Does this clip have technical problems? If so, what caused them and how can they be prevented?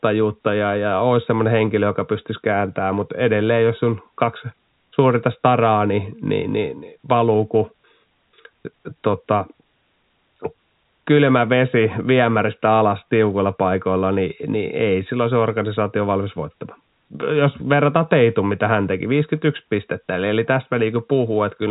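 No, this clip has no technical problems.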